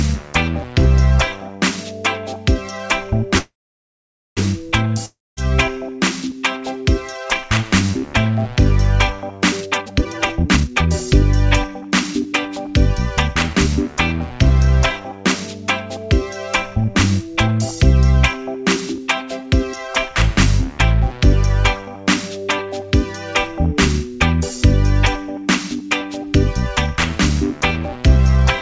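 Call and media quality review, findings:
Call audio freeze, 3.38–4.39 s. Packets likely held up in transit, jitter buffer ran empty. Last sound stretched into a fading buzz, then about 0.87 s of silence. Audio resumes exactly where it stopped, nothing skipped, but playback now runs about 1 s later.

Long network dropout, 5.06–5.39 s. Likely packet loss with no audio arriving. Fading buzz fills the gap, decaying to about 0.23 s of silence. Playback resumes further on, roughly 0.3 s of material never played.

Jitter buffer speed-up at three points: 9.60–11.14 s at 156% speed, about a second removed; 11.67–12.68 s at 106%; 13.28–13.69 s at 110%. Buffer over target, so pitch-period pieces are cut repeatedly. Pitch is unchanged but timing is rushed, most obviously in the first stretch. Band stops at 8 kHz throughout, consistent with G.722 at 64 kbps.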